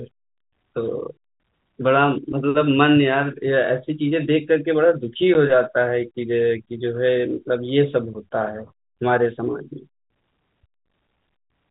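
At 5.34 s a single 10 ms gap of packet loss filled with silence breaks the speech: one packet dropped, replaced by hard-edged silence.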